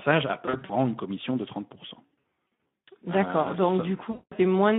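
From start to end the audio carries Speex codec damage: a hoarse, grainy roughness, plainly audible, inside a narrowband line of roughly 200 Hz to 3.6 kHz. The character fits a low-rate Speex setting near 11 kbps, where too few bits describe the excitation. Unlike the concealment below, this colouring is constant and never fades or buzzes in bursts.

VoIP packet loss concealed by the speech codec appears three times. From 0.45 to 0.71 s, just before "une commission de", the sound smears into short stretches of extrapolated sound. The losses are scattered rather than one gap, with runs no longer than 40 ms, about 140 ms missing in all. From 2.08 to 2.90 s the same smearing is heavier, with runs up to 80 ms and about 460 ms missing. From 4.11 to 4.33 s about 200 ms is concealed. The pattern fits 20 ms frames. The decoder repeats its last pitch and filter and lowers the gain, so the gaps become fading sound rather than silent dropouts, and the sound stays weak briefly afterwards.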